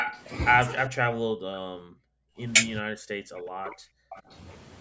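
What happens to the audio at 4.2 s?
An echo leak runs from 4.1 to 4.22 s: a faint, delayed copy of the speech trailing it by 420 ms, likely an echo canceller letting loudspeaker sound back through. On a spectrogram it shows as weak harmonics repeating the earlier pattern.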